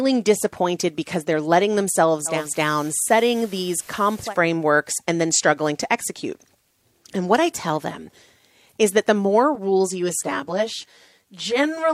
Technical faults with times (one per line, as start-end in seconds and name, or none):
2.25-4.36 digital radio blending to analogue
9.55-11.94 channel delay (comb filtering)